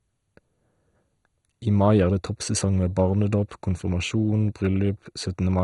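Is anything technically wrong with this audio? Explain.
Yes. Throughout the speech the sound is dull, gurgling and granular, with nothing above 11.2 kHz. This is likely MP2 compression at a rate consistent with about 56 kbps, too few bits to keep its upper sub-bands switched on.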